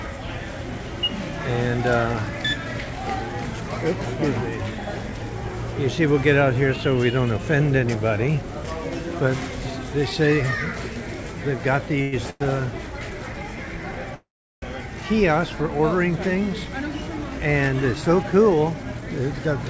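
Packets were likely held up in transit, so the jitter buffer ran dry and produced three call audio freezes: about 0.1 s each at 12.02 s and 12.30 s, then 0.48 s at 14.14 s. Each time the last sound is stretched into a fading buzz or hiss. In the longest freeze it dies to silence for about 0.36 s, then the audio resumes where it left off, delayed but not missing. From 16.24 s to 19.48 s a jitter buffer speed-up drains the excess delay by cutting short pitch-period slices, about 0.3 s in total. The audio runs about 8% fast at unchanged pitch and sounds hurried, with the G.722 call path's band limit at 8 kHz beneath it.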